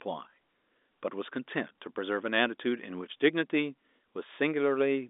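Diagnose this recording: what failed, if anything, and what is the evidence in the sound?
Nothing failed: the speech sits in a telephone band of about 250 Hz to 3.6 kHz with nothing above 3.8 kHz, as expected of a normal G.711 A-law line at 64 kbps, and no stage from capture to playback shows a defect.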